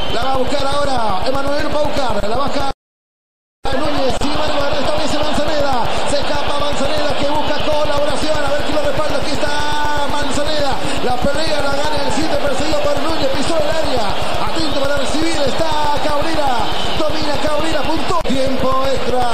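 From 0.1 to 19.23 s, periodic USB or driver dropouts occur every 0.125 s, about 150 in all. Each time, something stalls the audio path. A few milliseconds of sound drop out to silence. The result is a steady ticking at eight per second.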